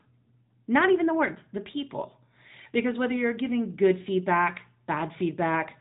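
From start to finish the speech carries plainly audible AMR narrowband mobile codec damage. Everything above 3.8 kHz is gone, and rebuilding each 20 ms frame from a vocal-tract model and a few pulses leaves a buzzy, synthetic edge that fits a mid rate near 10.2 kbps.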